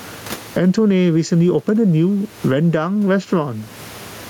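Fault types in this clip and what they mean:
gain pumping: loud and soft parts sit closer in level and the sound is squashed, a swing of about 20 dB, likely from a fast limiter clamping excessive microphone gain.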